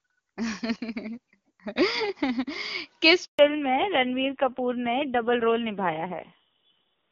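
A handover gap at 3.25 s cuts the speech to silence for 140 ms as the call switches networks and no frames arrive. Fallback to narrowband follows at 3.39 s: the call leaves HD Voice, which points to a low-rate narrowband codec around 5.9 kbit/s. Everything above 4 kHz disappears, leaving the speech duller and rougher to the end.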